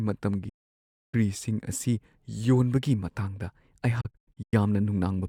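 A digital broadcast dropout hits from 0.49 to 1.14 s: the speech fades out over about 8 ms and stays silent for roughly 640 ms, pointing to a long run of corrupted frames that the receiver muted. A second dropout, from 4.01 to 4.54 s, breaks into several short holes spread over 512 ms, the longest 96 ms, totalling 288 ms missing. Whatever was broadcast during those gaps never returns.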